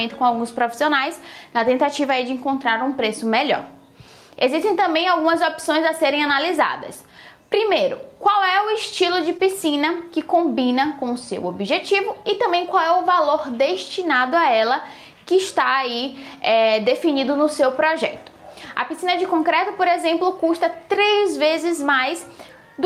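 A DC offset runs through the whole clip: the waveform sits shifted off zero by a constant amount, eating headroom and leaving steady energy at the very bottom of the spectrum. Gain pumping is also present throughout: the gain ducks by around 10 dB under each loud moment, likely because the input gain was set too high and a fast limiter keeps clamping it. At 9.37 to 9.42 s there is a short stall from a late packet: the jitter buffer ran dry, so the last sound was stretched by about 20 ms and then resumed with nothing lost, giving a brief held moment.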